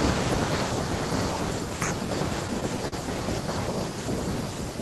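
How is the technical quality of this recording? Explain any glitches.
The recording has one glitch, a burst of repeated stalls (stutter) between 2.47 and 2.94 s. Packets arrived late, so the jitter buffer drained four times, and the receiver stretched the last sound across each gap, about 68 ms in all, the longest 42 ms. Nothing is lost, but the speech drags and stutters through that stretch.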